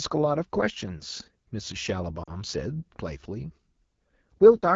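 Throughout the speech, the AMR wideband (HD Voice) codec is working at one of its lowest rates, which fits roughly 8.85 kbit/s. At that rate the pulse-driven model of the vocal tract can't follow the voice closely, so the speech sounds rough and raspy, and the damage is plainly audible. This is not simple band-limiting, because the top of the band still carries energy. Above about 6.4 kHz that energy is shaped noise, which gives the top a hissy, synthetic sheen.

From 2.23 to 2.31 s there is a burst of lost AMR speech frames: about 40 ms of speech, which fits two 20 ms frames that failed their checksum. Rather than leaving silence, the decoder repeats the last good pitch and vocal tract settings at falling gain, so the sound smears into a brief warbling, fading stretch before the speech resumes. That smeared tail is what sets it apart from a hard dropout or a digital click. There is no abrupt cut to silence and no sharp edge.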